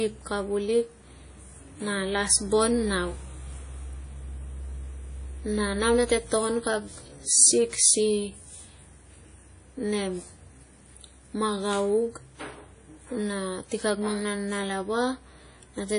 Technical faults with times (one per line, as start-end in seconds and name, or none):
0.00-15.99 WMA compression